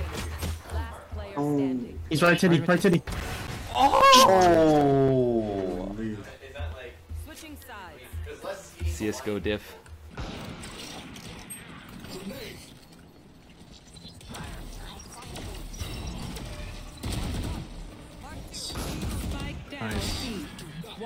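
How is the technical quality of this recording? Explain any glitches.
Two runs of CD scratch ticks mar the recording: 2.40 to 5.89 s and 16.08 to 19.57 s, fourteen ticks each, about four per second. A disc blemish exceeds error correction once per revolution, so the player interpolates or mutes samples, producing uneven clicks or dropouts up to roughly 10 ms.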